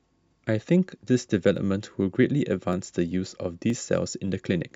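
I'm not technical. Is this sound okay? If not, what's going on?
No. The recording most likely lost tiny slivers of audio, under a millisecond each, known as dropped samples. The speech then jumps abruptly from one point to a slightly later one, causing a sharp click at 1.56, 2.73 and 3.70 seconds.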